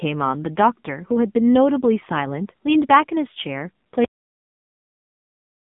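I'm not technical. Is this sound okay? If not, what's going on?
No. The whole clip has gone through the AMR narrowband mobile codec, the phone-call compression, so the speech sounds muffled, buzzy and robotic. Then there's a cut-off end: at 4.05 s the audio suddenly stops mid-sound and drops straight into dead silence.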